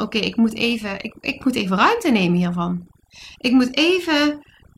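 Overdone noise removal runs through the whole clip, from start to finish. A noise reduction stage was pushed far too hard on a noisy recording, so any frequency band sitting close to its noise estimate gets pulled down sharply or switched off entirely. The quieter parts of the speech fall below that threshold and vanish with the noise. Between phrases the background drops to near silence scattered with twinkling specks.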